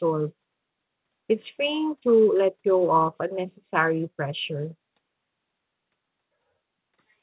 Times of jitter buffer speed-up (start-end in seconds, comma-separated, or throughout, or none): none